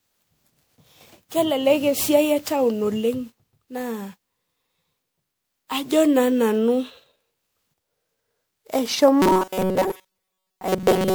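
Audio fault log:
Throughout, generation loss: the speech comes across swirly, smeared and hollow, with blurred attacks, rougher than one pass of MP3 at 128 kbit/s would leave it. The likely cause is roughly ten rounds of MP3 decoding and re-encoding, each adding fresh quantisation noise and spectral holes on a shifted frame grid.
9.22 to 11.15 s, robotic sound from repeated short buffers: the speech turns into a stiff metallic buzz at 188 Hz that only loosely follows the talking. The likely cause is starved playback looping a chunk of about 5.3 ms, which fits that buffer length, while most of the real audio gets skipped.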